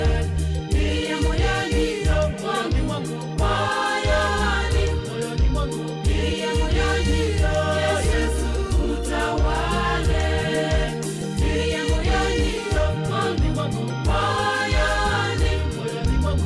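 No technical faults can be heard in this audio, so there is nothing to describe in time order.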